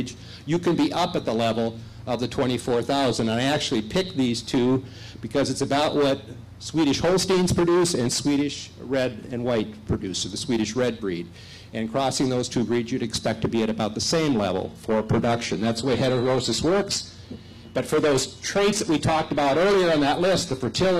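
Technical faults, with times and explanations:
14.65 s to end: adaptive stream at a lower bitrate; a sudden, gapless switch to a leaner encoding leaves the spectrogram empty above 14.9 kHz.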